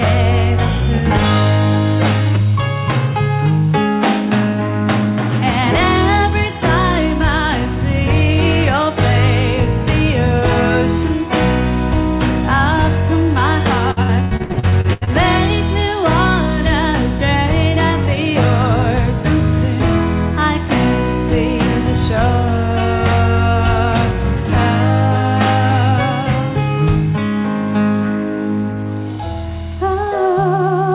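From 13.91 s to 15.10 s there is repeated packet loss, heard as a robotic sound. Over this 1.2 s stretch the stream breaks up eleven times. Each gap is filled by extending the last received sound, and the next gap arrives soon after. The longest gap is 102 ms. About 558 ms of the span is patched-over concealment, close to half of it, and another 510 ms of original material is missing. The result is choppy, synthetic-sounding audio with pieces lost. Throughout, the call path's band limit at 4 kHz is audible, which fits G.711 mu-law at 64 kbps.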